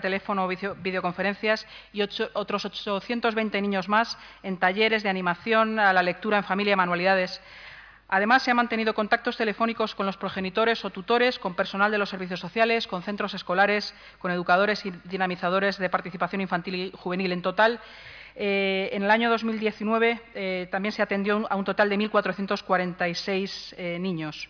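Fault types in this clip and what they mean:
No fault types can be heard in this clip.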